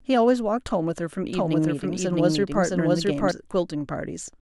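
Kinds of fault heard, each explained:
Doubled audio track: From 1.33 s to 3.31 s the speech plays twice. A second full-band copy trails the first by roughly 0.7 s at about equal loudness. It has no decay or room colour and starts and stops abruptly, likely from a second, slower capture path.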